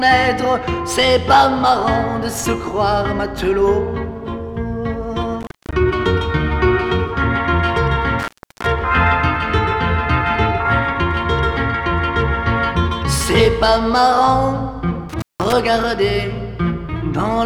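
An intermittent contact, a loose cable or plug briefly opening, breaks the signal three times: at 5.41 s for about 0.22 s, at 8.19 s for 0.33 s, and at 15.09 s for 0.18 s. Each time the sound drops out to faint hiss, with crackle as the connection opens and closes.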